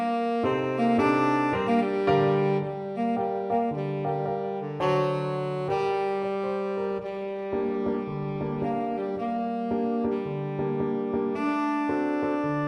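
From 6.87 s to 9.61 s there is a call bitrate drop. The sound turns rough and watery and loses its top end, which fits the encoder being pushed from about 96 kbps down to roughly 21 kbps. Unlike packet loss, nothing drops out, and the sound comes back cleanly afterwards.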